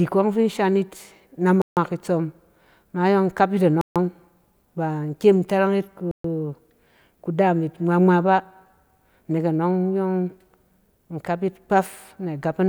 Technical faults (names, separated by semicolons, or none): Bluetooth stall